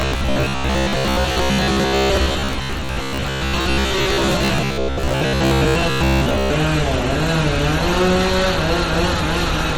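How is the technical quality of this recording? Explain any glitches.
The recording has two clear faults: a robotic buzz over most of the first part, and compression damage throughout.

From 0.02 s to 6.52 s there is a robotic sound from repeated short buffers. Audio likely arrives too seldom, and the gaps are filled by looping the last short stretch, about 15 ms, for most of that span. The repetition imposes a fixed 66.8 Hz buzz. That steady pitch sets it apart from codec swirl.

Throughout, there is a watery, smeared quality, likely from MP3 compression at a low bitrate, around 48 kbps. The encoder cuts the treble and lets weak frequency lines flicker between frames. The result shimmers and wobbles rather than holding one buzzing pitch.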